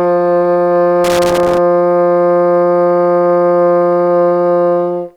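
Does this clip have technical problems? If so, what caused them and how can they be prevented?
Yes. From 1.04 to 1.58 s the music breaks into an irregular burst of scratchy crackle. This is loose connector crackle: a worn or dirty contact moving in its socket repeatedly breaks and restores the signal, chopping it. Clean, reseat or replace the connector and secure the cable against movement.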